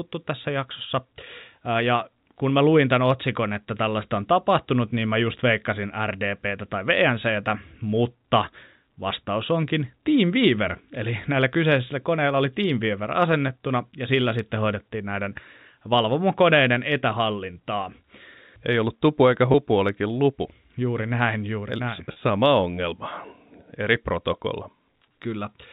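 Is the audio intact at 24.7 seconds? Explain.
Yes, at 24.7 seconds the speech runs on without any dropout, click or other break, carried through the normal telephone-band G.711 coding.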